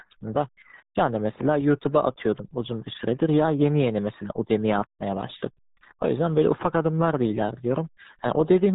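Muffled, gargly speech throughout, with nothing above 3.8 kHz and heavy smearing, the sound of the RealAudio 14.4 codec, which fits its 8 kbit/s dial-up rate.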